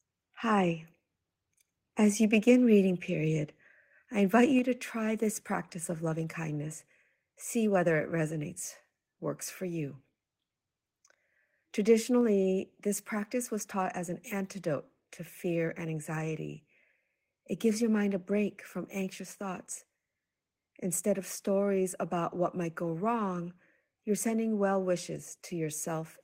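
Microphone volume stepped down at 4.59 s, between "I invite" and "to try this practice", and again at 12.21 s in this speech clip. Voice and background drop suddenly by about 3 dB, then about 2 dB, likely because call software lowered the microphone's input volume in a single step each time.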